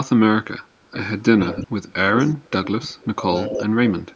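Echo leak appears from 0.91 to 1.23 s, 1.39 to 1.68 s, 1.88 to 1.95 s, 2.17 to 3.07 s and 3.45 to 3.65 s: a copy of the speech returns 370 ms behind the original. The likely cause is a loudspeaker on the far end whose echo canceller failed to scrub what its microphone picked up. Most scraps sit roughly 10 to 15 dB under the direct speech. The brief one near 1.9 s is barely audible.

Speech suppressed in double talk follows from 3.12 to 4.12 s, with the 3.45 s echo overlapping it. The speech sinks, at its deepest by about 25 dB, and drops out in pieces totalling about 0.7 s. The echo canceller, likely unable to tell the local talker from the returning loudspeaker signal while both were active, turned everything down together. The speech thins and gaps instead of staying steady.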